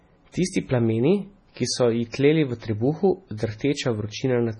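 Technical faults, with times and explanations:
Throughout, MP3 compression: nothing comes through above 10.5 kHz, and the speech has that heavy watery, swirly quality with chirpy s sounds, which fits a very low bitrate around 24 kbps. Most likely an MP3 encoder starved of bits, cutting treble and dropping weak frequency lines frame to frame.
2.10–2.14 s, pre-echo: right after "plameni ki so ji" and just before "tleli v trebuhu", there's a short hiss of about 37 ms ahead of the attack, which sounds smeared. The codec spread its quantisation noise across the whole block, so noise meant for the loud onset leaked into the quiet moment before it.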